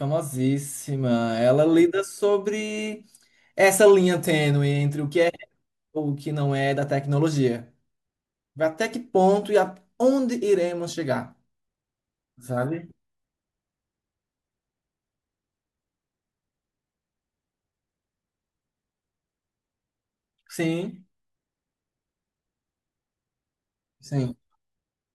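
Nothing stood out as a technical problem on listening to this speech recording.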